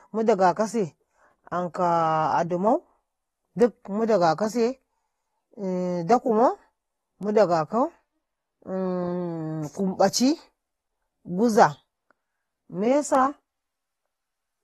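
AAC compression runs through the whole recording from start to end. Nothing sounds above 12.4 kHz, and the speech is dull and smeared, with a plainly audible warbling, fizzy texture on sibilants and held sounds. This is likely AAC-LC coding at a low bitrate, which fits around 32 kbps: the encoder quantises each frame's frequency lines coarsely against a hearing model, drops the top band, and leaves gaps that shimmer as they open and close.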